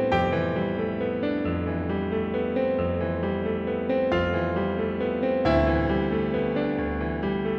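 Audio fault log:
The music signal runs with nothing in it that calls for an entry.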